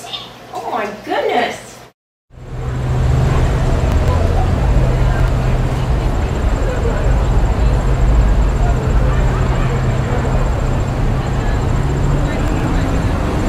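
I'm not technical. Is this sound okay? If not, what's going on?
No. At about 3.92 to 4.08 s, 5.2 to 5.28 s and 12.48 to 12.64 s, the sound briefly jumbles, as if a tiny piece skipped ahead and then jumped back. This is chunks out of order. The audio travels in small slices, here 40 ms each, and one slice arrived late and played after the ones meant to follow it: three slices late in the first and last spots, one slice late in the middle. Nothing is missing, but the order is wrong and the joins are sudden.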